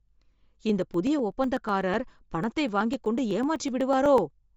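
From the very start the speech has a breathy, grainy edge, and nothing is heard above 7.7 kHz, so sibilants sound dull and slightly hissy rather than crisp. The damage is plainly audible throughout. This is likely Bluetooth LC3 compression, the transform codec of LE Audio. At a low bitrate, around 32 kbps here, with what sounds like 10 ms frames, it discards much of the upper spectrum and fills the gaps with noise, producing that rough texture and the hard top edge.

From 0.07 s to 4.43 s a steady run of tiny ticks sounds eight times a second, every 0.125 s, about 40 in all, audible only while sound is present. These are periodic USB or driver dropouts. At a fixed interval something stalls the bus or the audio driver, and each time roughly half a millisecond of audio is skipped outright rather than replaced by silence. The signal jumps across each gap, and the abrupt discontinuity is heard as a tick.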